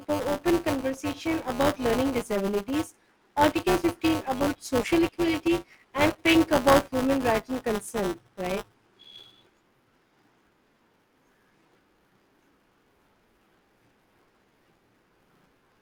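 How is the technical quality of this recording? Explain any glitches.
The recording has one fault, buffer tearing, present throughout the speech. The writer and the reading hardware have drifted so they cross within every buffer period, so roughly a tenth of each period plays audio about 15 ms stale, spliced in with hard edges. Those joins recur 200 times per second, pointing to a 5 ms period, and produce a constant robotic buzz that appears only while someone is talking and drops out in pauses.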